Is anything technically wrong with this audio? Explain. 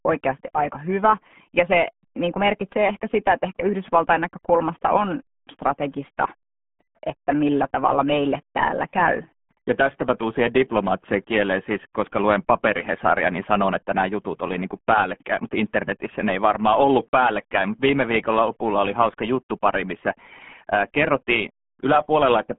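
Yes. Throughout the clip, the speech has been squeezed through the RealAudio 14.4 codec, and the sound points to a low-rate coder around 8 kbit/s. It keeps only a narrow band, roughly 150 Hz to 3.4 kHz, with nothing above 3.8 kHz, leaving the voice muffled, gargly and heavily smeared.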